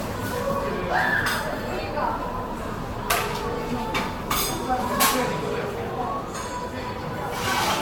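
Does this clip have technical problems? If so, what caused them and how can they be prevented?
Yes. Generation loss runs throughout: the sound swirls, smears and turns hollow, with attacks blurred, and nothing above 19.2 kHz. Unlike a single low-bitrate encode, the damage exceeds what a rate near 66 kbit/s explains, likely from about four successive Vorbis passes, each requantising on a shifted frame grid. Keep a lossless master and encode only once, at the final stage.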